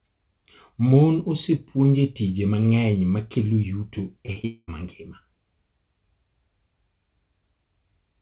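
Just after "mang'eny ma kelo yuto", short concealed packet loss hits three times: 4.26 to 4.30 s, and, after "ma kelo yuto e", 4.32 to 4.38 s and 4.42 to 4.45 s. The receiver patched each 20 to 40 ms gap by extending the preceding sound, heard as quick smears and wobbles. On a waveform these appear as brief patched stretches. A spectrogram shows brief blurred patches within the telephone band, which is empty above 4 kHz.

A long network dropout follows from 4.45 to 4.70 s, likely a stretch where no packets arrived. About 220 ms of audio is missing. The receiver's continuation is a buzz or hiss that fades and then gives way to about 30 ms of silence before the speech returns. The waveform shows a decaying pattern flattening to a line. The spectrogram shows the continued sound thinning to blank.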